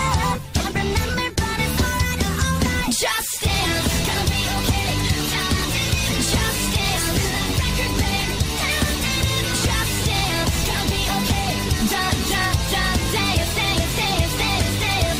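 No technical faults are audible.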